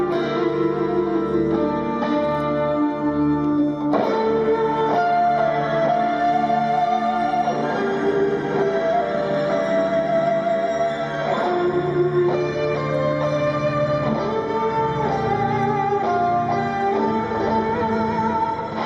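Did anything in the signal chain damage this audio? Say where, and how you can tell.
No, nothing in the signal chain audibly damaged this audio. No stage of the chain leaves a mark that can be heard at any point in the recording.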